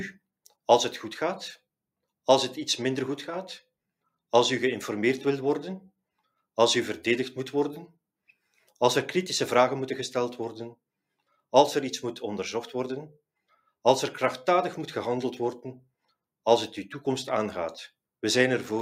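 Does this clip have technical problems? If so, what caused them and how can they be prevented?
No technical faults are audible.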